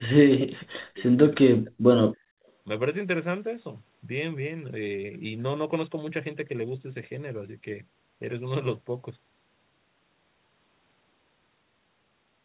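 Speech suppressed in double talk affects this speech recording from 0.00 to 1.17 s and again from 1.40 to 1.89 s. The voice dips by roughly 40 dB for about 0.7 s in the first stretch and half a second in the second. The likely cause is both ends talking at once: the echo canceller could not tell the local talker from loudspeaker echo and pulled everything down. Background gated by the echo canceller follows at 2.17 to 2.35 s. The room sound drops by about 26 dB for roughly 0.2 s while the canceller clamps the microphone against loudspeaker playback, then recovers once it releases. Throughout, the audio carries nothing above 4 kHz, consistent with a narrowband G.711 call path.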